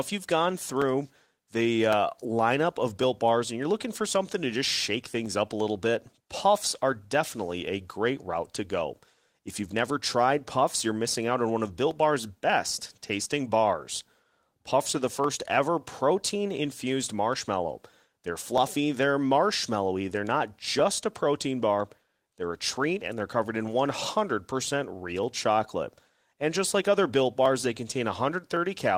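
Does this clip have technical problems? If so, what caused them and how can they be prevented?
Yes. Clock drift buffer slips run from 0.82 s to 28.57 s, beginning just after "you've gone": a regular click every 1.11 s, around thirty in all. The likely cause is two devices on separate clocks differing by roughly 300 ppm, so the buffer between them slowly drifts until a block of about 15 samples is dropped or repeated. Prevent this by locking both devices to one shared clock, or by using an asynchronous sample-rate converter between them.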